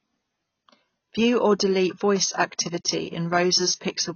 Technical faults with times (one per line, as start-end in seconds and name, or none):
0.00-4.16 AAC compression